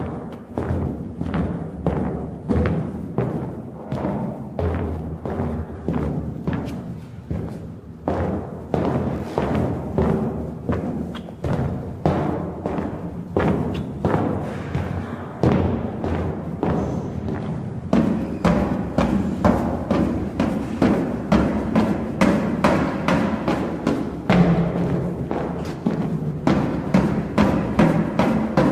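No technical faults can be heard anywhere in these everyday sounds; the signal stays continuous and intact throughout.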